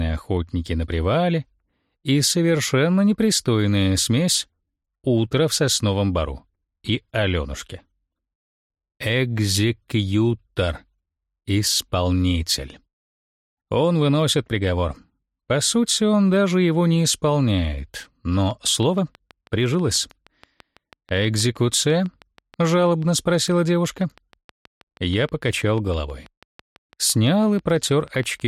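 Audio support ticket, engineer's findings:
Train of clicks, 18.51–28.41 s: regular ticking at about 6.2 per second, some seventy pulses, peaking near programme level and audible through pauses. Likely external interference or a failing interface. Spectrogram: evenly spaced vertical broadband lines. Waveform: near-identical narrow spikes.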